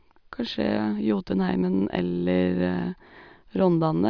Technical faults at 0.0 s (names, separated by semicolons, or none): none